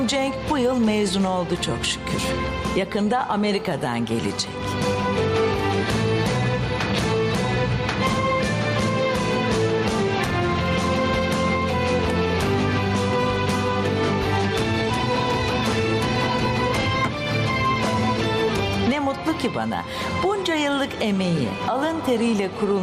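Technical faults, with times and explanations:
Throughout, gain pumping: the input gain was likely set far too high for the microphone, so a fast limiter or compressor keeps clamping the level each time a loud sound arrives and releases it again afterwards. The gain swings by something around 10 dB. The loud and quiet passages sit unnaturally close together, giving a squashed, breathing sound.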